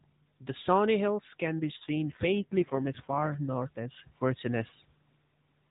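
From 1.72 to 3.38 s, between "can be" and "north as", an AMR rate drop makes the narrowband mobile speech turn buzzier and more synthetic, which fits the codec stepping down from 12.2 to 5.9 kbps. Unlike packet loss, nothing drops out, and the band stays unchanged.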